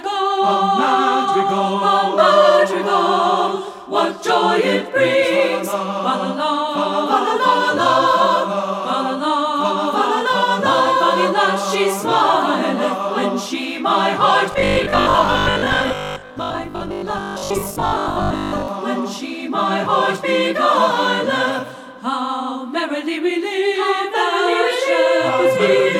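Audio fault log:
14.52 to 18.68 s, robotic sound from repeated short buffers: new audio likely arrived too seldom, so about half the time was filled by looping the last block, which fits a 20 ms buffer. Real audio was skipped, and the repeats stamp a rigid, metallic 50 Hz buzz onto the sound.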